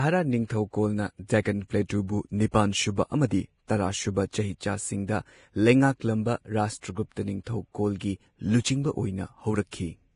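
From start to finish the speech carries heavy damage, most likely from Vorbis compression at a low setting; the harshness fits a bitrate near 31 kbps. Nothing remains above 10.6 kHz, and the treble just below that cut-off turns into grainy hiss, roughening sibilants and softening consonant attacks. Unlike steady background noise, this hiss rises and falls with the speech itself.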